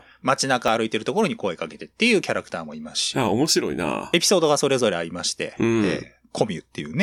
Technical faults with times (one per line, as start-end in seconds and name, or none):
0.68 dropped buffer (overrun)